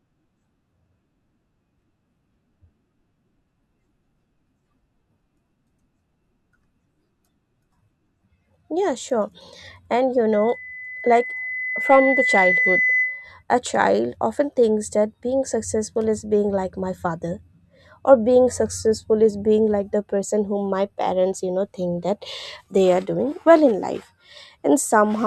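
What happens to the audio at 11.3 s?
At 11.3 s the speech is caught in a loudspeaker feedback squeal running from 10.32 to 13.43 s. A microphone is hearing the loudspeaker it drives, and at 2 kHz the loop gain tops one, so that tone feeds itself, swelling over roughly two seconds into a piercing whistle about as loud as the speech. On a spectrogram it appears as a bright horizontal line at 2 kHz; the waveform shows a steadily widening sinusoidal envelope.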